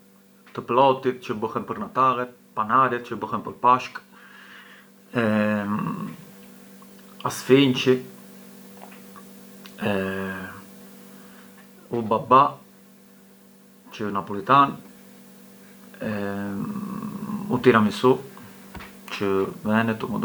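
No technical faults can be heard anywhere in the speech recording. Nothing breaks up, jumps or changes in level at any point.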